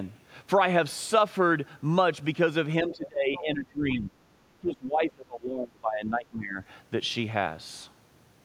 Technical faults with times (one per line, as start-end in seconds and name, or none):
2.82-4.14 speech suppressed in double talk
3.35-3.41 other side's voice leaking through
4.60-6.60 speech suppressed in double talk